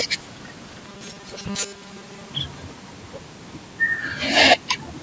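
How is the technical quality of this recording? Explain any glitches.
The recording has one clear glitch, in speech that has passed through call microphone processing, with nothing above 8 kHz.

From 0.88 to 2.33 s there is robotic sound from repeated short buffers. The likely cause is audio arriving too seldom, so the software kept repeating a 5 ms slice to fill the gaps, for most of that stretch. The repeats impose a steady 200 Hz metallic buzz that only loosely tracks the speech. A spectrogram would show rigid, evenly spaced harmonics at multiples of 200 Hz, and the waveform would show identical 5 ms cycles.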